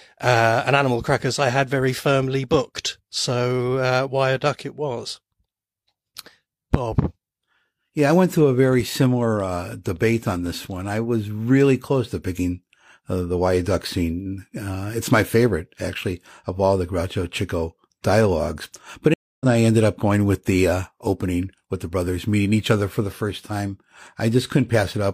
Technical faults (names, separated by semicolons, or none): stream reconnect